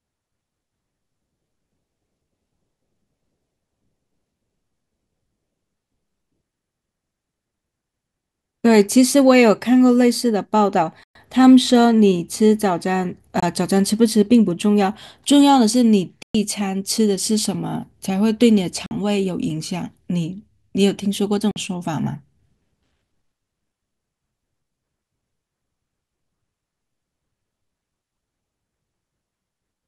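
Five short silences cut into the speech at 11.03–11.15 s, 13.40–13.43 s, 16.23–16.35 s, 18.86–18.91 s and 21.51–21.56 s, lasting about 116, 23, 116, 46 and 46 ms. They are likely a Bluetooth dropout: late packets were discarded, and the lengths fall in steps of about 23 ms, which fits whole packets going missing. Unlike a stutter or underrun repeat, nothing replays. The sound stops and resumes further on, as if it had kept playing.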